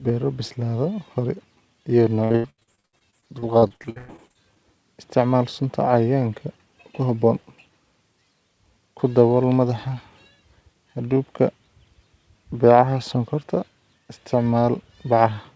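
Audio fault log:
2.24–4.58 s, repeated packet loss (robotic sound): after "beero bislaada hore iyo" until "isticmaal sunta", some two dozen dropouts, the longest 105 ms, are patched by extending the previous sound. About 38% of the stretch is concealed, giving choppy, robotic speech, band-limited below 8 kHz.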